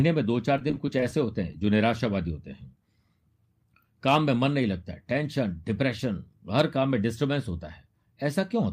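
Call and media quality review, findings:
Repeated packet loss (robotic sound), 0.57–1.27 s: packets lost or late nine times in succession, each gap up to 15 ms, receiver concealment patching every hole from the preceding audio. About 18% of the span synthesized; choppy, robotic speech with fragments missing.

Short concealed packet loss, 1.53–1.55 s and 1.60–1.62 s: two isolated late or lost packets, about 10 ms missing each, filled by extrapolating the preceding audio and then crossfading back. Audible as brief smear or wobble; short consonant may drop out.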